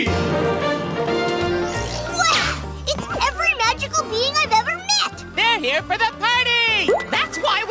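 Nothing goes wrong anywhere in the audio, so there's no technical fault to point to here.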